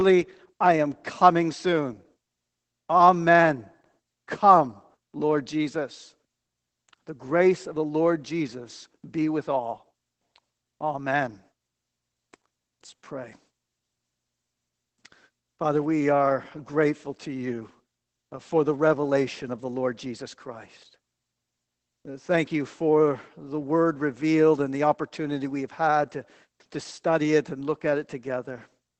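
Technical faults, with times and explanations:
Throughout: Opus voice compression. The whole speech track has that squeezed, low-rate codec sound. Nothing up top past 8 kHz, so it's muffled, and there's a hoarse, slightly robotic edge because the SILK coder models the voice with linear prediction and only roughly codes the excitation underneath. The damage is plainly audible, which fits Opus running in voice mode at around 12 kbps with 20 ms frames.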